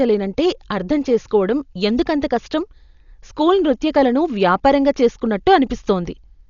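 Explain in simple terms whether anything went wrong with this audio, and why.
Yes, the speech is dull from start to finish, with nothing above about 6.9 kHz, and a rough, fluttering hiss clings to the voice. This is likely heavy Dolby Digital compression: the encoder dropped the treble and the decoder filled missing detail with noise.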